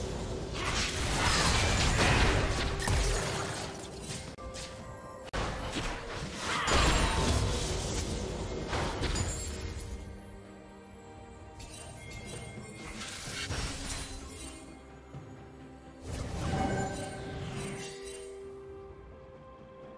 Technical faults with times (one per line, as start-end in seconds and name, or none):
none